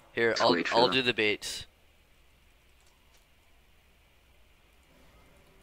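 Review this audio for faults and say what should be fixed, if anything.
A corrupt frame decoded fault appears twice: a short glitch from 0.46 to 0.49 s, spanning roughly a couple of frames, and a brief glitch at 4.33 s touching a few frames. Flipped bits in the compressed data were decoded as if valid, so misread gains and codes put energy at the wrong frequencies. On a spectrogram each shows as a narrow vertical smear or stray tonal streak. Prevent it with error detection on frames, so damaged frames are concealed instead of decoded.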